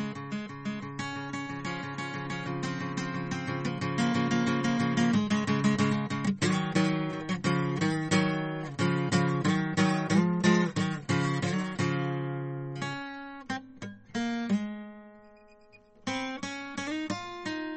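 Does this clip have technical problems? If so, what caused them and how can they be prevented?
Yes. Throughout the music the treble stops dead at 8.4 kHz, and what remains has a watery, swirling quality with plainly audible damage. This is likely MP3 compression at a bitrate that fits about 32 kbps. Short of bits, the encoder trims the top band and zeroes quieter frequency lines that flicker on and off between frames. A simple low-pass filter would dull the sound without that shimmering churn. Encoding at a higher bitrate prevents it.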